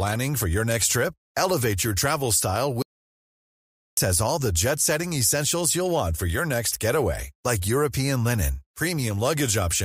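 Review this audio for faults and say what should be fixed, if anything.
Audio dropout to silence from 2.82 to 3.97 s, after "your travel style" and before "has all the jet": 1.15 s of silence, likely a lost input link, flat on the waveform and blank on the spectrogram. Prevent it by securing connections and monitoring input levels during recording.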